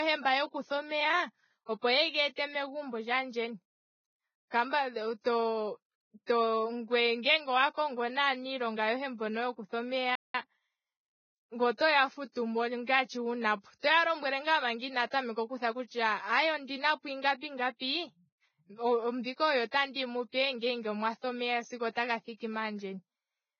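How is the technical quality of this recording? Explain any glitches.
The quality is fairly rough: heavy codec damage throughout, plus one brief dropout with a hurried recovery.

Throughout, the treble is hissy and grainy, likely from heavy Vorbis compression at a very low bitrate, somewhere around 15 kbps.

At 10.15 s the speech just stops for about 190 ms until 10.35 s, likely a playback stall where the player briefly ran dry of data.

From 10.35 to 11.59 s there's time-compressed catch-up. The player trims tiny slices to clear its backlog, so speech runs 1.15 times fast at normal pitch.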